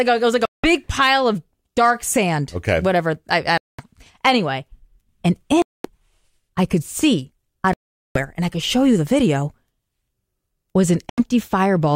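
Five clean holes punch through the audio at 0.45–0.67 s, 3.58–3.86 s, 5.62–5.88 s, 7.73–8.18 s (the longest, nearly half a second) and 11.09–11.21 s. The edges are abrupt or fade over a few milliseconds, and when the sound comes back it has skipped ahead as though it kept playing during the gap. That's the signature of a Bluetooth dropout, likely packets not reaching the headphones in time and being thrown away, leaving silence until good ones arrive.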